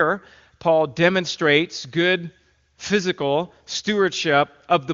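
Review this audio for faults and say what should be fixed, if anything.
Nothing here needs fixing: the speech comes across clear, as you'd expect from AMR wideband (HD Voice) at 23.85 kbit/s, with no damage from the codec beyond what's faint at most.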